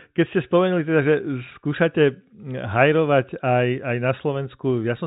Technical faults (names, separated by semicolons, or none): none